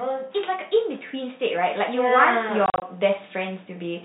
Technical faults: automatic gain rising; packet loss filled with silence

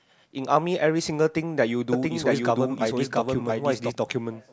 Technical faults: doubled audio track

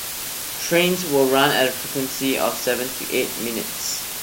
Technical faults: low bit depth with dither

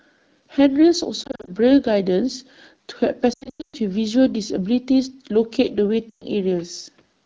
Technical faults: lost AMR speech frames

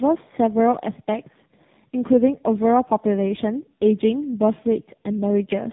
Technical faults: tandem speech coding

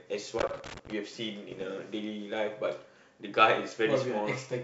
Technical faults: loose connector crackle; bit errors on an ADPCM link

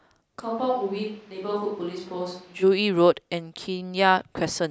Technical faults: switch to a distant microphone

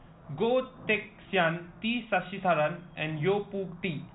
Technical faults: none

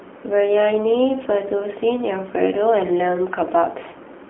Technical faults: AMR narrowband mobile codec

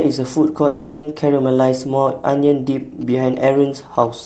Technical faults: long network dropout; GSM signalling bursts

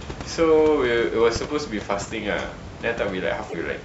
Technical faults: damaged data in a compressed stream

